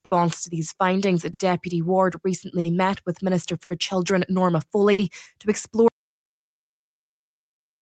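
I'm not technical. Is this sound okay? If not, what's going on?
No. There are four problems.

First, a noise suppressor built for speech was left on. It mistakes steady parts of the sound, and any lingering tail, for background noise and turns them down. Quick onsets get through. So the sound pumps and thins out, though only mildly.

Second, there is clock drift between sender and receiver. The sending device's clock runs roughly 5 percent slow. The receiver keeps running short of sound and has to cover the gaps. This causes small timing hiccups throughout.

Third, there are five short stalls from late packets. They happen at 0.05, 1.33, 2.59, 3.64 and 4.92 seconds. Each time, a piece of sound arrived late. The receiver held the last sound for about 50 to 60 milliseconds. Nothing is lost, but you hear a brief stretch or buzz.

Fourth, there is an audio dropout to silence. At 5.88 seconds the sound cuts out completely and stays silent until the end. 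It is dead silence, with no background left. The likely cause is a lost input, such as a disconnected device or a failed link.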